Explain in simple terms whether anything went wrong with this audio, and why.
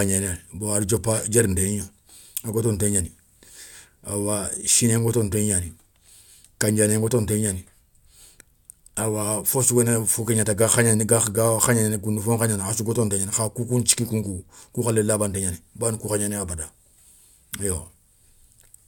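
Nothing went wrong with this speech recording that a careful listener can pick out. The sound stays steady and continuous throughout, with nothing unexpected happening at any point.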